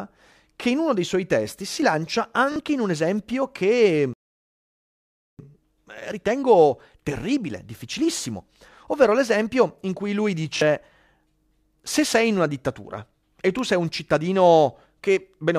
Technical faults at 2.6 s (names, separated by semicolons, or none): repeated buffer